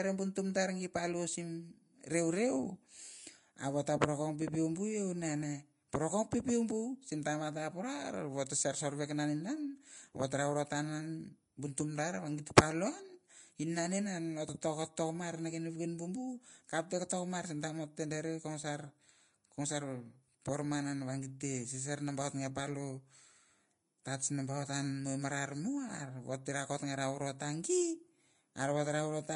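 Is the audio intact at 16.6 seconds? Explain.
No. At 16.6 seconds, as throughout the speech, the sound is hissy and grainy, with roughened tones, smeared consonant attacks and nothing above 10.6 kHz. This is likely Vorbis compression at a low bitrate, around 33 kbps, coarsely quantising the treble into noise.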